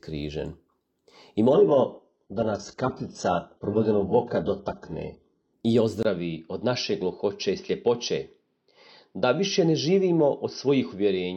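At 1.53 s the sound abruptly loses its top end and stays that way until 5.53 s. This is an adaptive stream at a lower bitrate: the player dropped to a much leaner encoding of the same audio. Nothing survives above 8 kHz, which fits a step down from roughly 96 kbit/s AAC to an 8 kbit/s HE-AAC stream. Unlike a device change, the transition has no gap, and quality returns just as suddenly.

At 6.03 s a brief silence of about 20 ms breaks the audio, and from there to the end the sound is duller, with nothing above 6 kHz. This is most likely an input switched to a poorer device, such as a headset's call profile. The level stays about the same, but a faint new background noise appears well below the signal. The short gap and the new noise floor set it apart from a bitrate drop, which changes texture without either.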